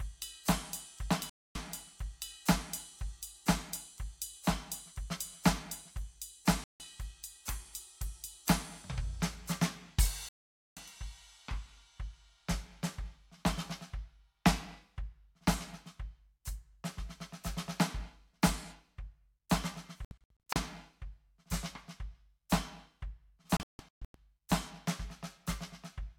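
The music drops out five times with a digital broadcast dropout: the receiver stopped getting decodable frames and muted until clean ones returned. Clean holes fall at 1.30–1.56 s, 6.64–6.80 s and 10.29–10.77 s, the last about half a second. At 20.05–20.56 s the loss is broken into several short gaps, none longer than 64 ms, and at 23.57–24.15 s into gaps up to 160 ms. The music resumes further along, with nothing from the gaps recovered.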